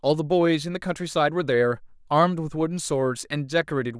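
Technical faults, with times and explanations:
No technical faults can be heard in this speech clip. There is nothing to time or explain.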